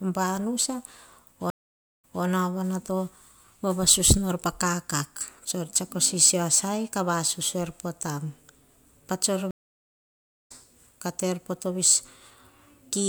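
At 1.50 s the speech drops out for about half a second, then returns at 2.24 s repeating roughly 0.22 s already heard. At 9.51 s it goes silent for nearly a second and resumes at 10.52 s on "kah te er poh" with about 0.7 s of speech skipped. Both are a stream reconnect: the connection broke, the player fell silent, reconnected and restarted its decoder mid-stream. The server resent a little earlier audio the first time and jumped ahead the second, with the restart fading in the first moment of returning sound.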